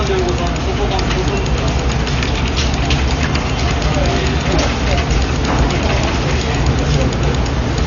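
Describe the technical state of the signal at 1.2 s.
At 1.2 s the audio has likely passed through heavy Dolby Digital compression at a rate that fits roughly 48 kbps. It persists throughout the clip. The encoder dropped everything above 6.9 kHz and starved many frequency lines of bits, so the sound is dull, with rough, fluttering noise around tonal parts.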